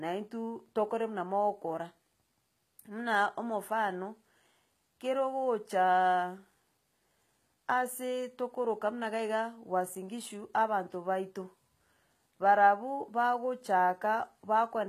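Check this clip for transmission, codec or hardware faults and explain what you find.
The speech carries one codec fault, present from start to finish: HE-AAC compression is the likely cause. Only the lower spectrum is properly coded; the treble is rebuilt by copying lower bands upward under a coarse envelope, so harmonics fail to align across the crossover. Sibilants come out gritty, metallic and lispy, damage that is plainly audible and fits a bitrate around 20 kbps. A spectrogram shows blurred, repeated-looking upper bands and nothing above 14.9 kHz.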